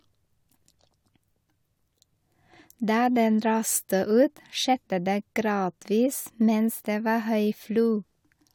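Nothing stood out as a technical fault on listening to the speech in this clip.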